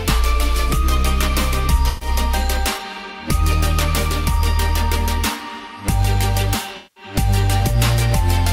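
At 1.88 s and again at 6.77 s, AAC frame loss with concealment breaks the audio. Decoder data went missing. The gaps were rebuilt from the last good spectrum. The first patch lasts 128 ms, the second 192 ms.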